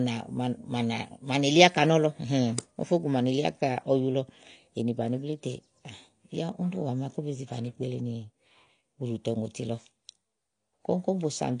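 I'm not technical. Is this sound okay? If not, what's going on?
No. Throughout the speech there is plainly audible damage from lossy compression, likely AAC compression squeezed to a small file size. Nothing is left above about 9.8 kHz, so it sounds dull, and thinned-out detail gives a warbly, fizzy edge to hissy consonants.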